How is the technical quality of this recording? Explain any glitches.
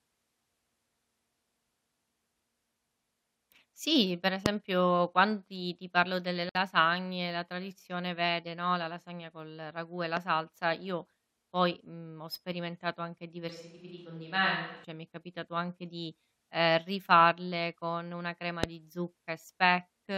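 The recording has three kinds of glitch: two pops, one short dropout, and a brief microphone change.

Loud pops occur at 4.46–4.48 s and at 18.64–18.66 s, right after "rifarle con una crema". Each is a single sharp pop, roughly 20 to 25 dB above the speech. The cause is likely a voltage spike from a plug, switch or static.

A gap at a join of encoded pieces appears at 6.49–6.55 s, after "ti ti parlo delle". Separately encoded segments were joined untrimmed, leaving a 58 ms gap before the speech resumes.

A switch to a distant microphone runs from 13.50 to 14.84 s. It starts after "mhmm ho sperimentato anche" and returns before "mi è capitato anche". The close mic likely dropped out. The voice turns roomy and hollow, about 5 dB quieter, with room noise about 35 dB below it.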